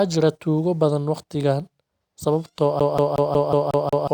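CD stuck on one turn from 2.80 to 4.08 s: a scratch sends the laser back one track on every revolution, so the same 0.18 s slice of speech plays seven times, each jump marked by a brief mute, producing a fast, even stutter.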